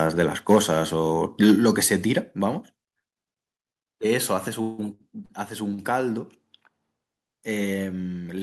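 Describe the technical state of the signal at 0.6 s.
Microphone overload affects 0.50 to 0.57 s, just before the 0.6 s mark. The loudest peaks there carry a harsh, crackling edge with flattened tops. The likely cause is an input volume set so high that the signal ran about 4 dB past the converter's ceiling, so roughly 7 percent of the samples in that stretch were cut off at the converter's limit rather than rounding over naturally.

Microphone volume stepped down at 0.57 s, so the signal at 0.6 s sits on the new, lower level. Voice and background both drop by about 2 dB in a single abrupt step, with no gradual fade. This is likely the call software reacting to the distorted peak just before it and lowering the device's input volume in one move to stop further clipping.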